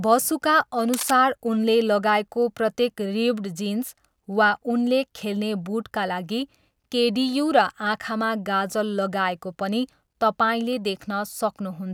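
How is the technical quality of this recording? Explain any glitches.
There's one glitch worth flagging, right near the start. From about 0.94 to 1.11 s, just before "उनले लगाएको प्रत्येक", you get a short burst of cable scratch noise, likely from a worn cable or connector being moved so its contact resistance jumps around erratically. It sounds like a rough scratchy rustle, around 10 dB down.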